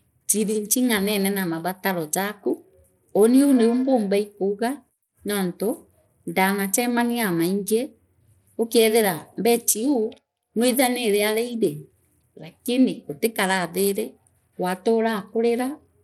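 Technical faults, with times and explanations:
Throughout, Bluetooth SBC compression: the speech has a plainly audible gritty, grainy edge, and nothing is heard above 16.5 kHz. The likely cause is SBC coding at a rate that fits about 96 kbps, which starves the top sub-bands of bits and coarsely quantises the rest.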